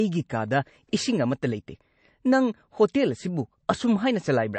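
Across the whole clip, the speech was likely squeezed through MP3 encoding at a bitrate low enough to point to roughly 36 kbps, so the encoder cut everything above 8.3 kHz and dropped weak frequency lines. The speech sounds dull, watery and swirly, with smeared consonant attacks.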